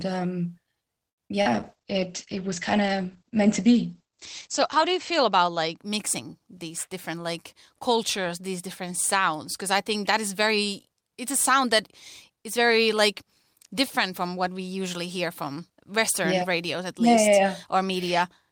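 At 1.09 s a packet arrived late and the jitter buffer ran empty, causing a short stall from a late packet. The receiver held the last sound for 82 ms until the packet came, then resumed where it left off. Nothing is lost, but the speech is drawn out, and the delay grows by 82 ms.

Two short concealed packet losses follow, at 1.28 to 1.32 s and 1.42 to 1.47 s. About 20 ms and then 40 ms of audio never reached the decoder in time. The receiver filled each gap by extending the preceding sound and blending back into the real audio, which heard as a brief smear.

From 1.55 s a call bitrate drop sets in. The bandwidth estimate fell and the encoder went from 32 kbps to 10 kbps, staying at the lowest rate for 3.41 s. Coding turns coarser and the audio band shrinks from 20 kHz to 8 kHz, so the speech sounds rough and muffled until it clears at 5.83 s, just before "mixing these different like".

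From 11.00 to 11.71 s, just before "that is very like", a jitter buffer speed-up occurs. The buffer held more audio than its target, so the receiver cut short pitch-period pieces, about 50 ms in total. The speech runs at 106% speed with unchanged pitch and sounds hurried.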